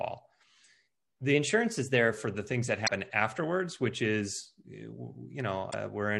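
From 1.34 to 2.11 s, just before "for the things that", the speech runs about 5.8% fast and rises by roughly 98 cents, close to a full semitone, then drops back in one step. This is most likely a drift correction step, where clock-matching software briefly changed the playback rate to rebalance its buffer. Unlike wow or flutter, the shift does not waver. Speed and pitch move together as one fixed offset with clean edges at both ends.

At 2.85 to 2.90 s, between "for the things that" and "afterwards which is", a short glitch of about 50 ms breaks in. A second one, about 60 ms long, comes at 5.68 to 5.74 s. Both are damaged data in a compressed stream: corrupt bytes make the decoder misread frames and lose sync until it finds a valid frame header again.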